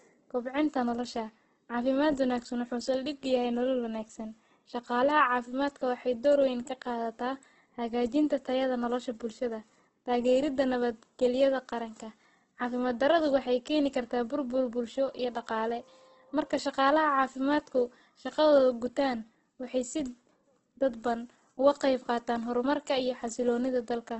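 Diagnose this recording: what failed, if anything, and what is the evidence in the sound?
Codec stage: throughout the speech, voiced sounds are grainy and rough rather than swirly, likely from heavy Opus compression in CELT mode at a rate near 12 kbps, which fills bit-starved bands with noise. A spectrogram shows a hard 8.2 kHz ceiling and noisy, blurred harmonics.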